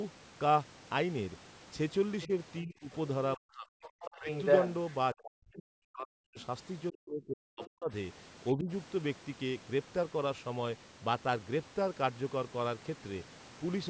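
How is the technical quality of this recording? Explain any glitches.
This is a speech call recording with clear echo-canceller problems between about 2 and 9 seconds. Its band stops at 8 kHz, which comes from the call's microphone processing.

Other side's voice leaking through occurs at 2.22–2.27, 3.83–4.69, 6.40–6.44 and 7.64–7.68 s. This is likely loudspeaker echo the canceller failed to remove. The brief scraps sit roughly 15 to 30 dB under the talker, but the 3.83 s stretch rises above the talker by about 5 dB.

Speech suppressed in double talk occurs at 2.27–4.29, 5.14–7.90 and 8.54–8.70 s. With both sides talking at once, the canceller likely turned everything down. The talker drops by up to about 40 dB, losing around a second, then around two seconds, then briefly ducks about 15 dB.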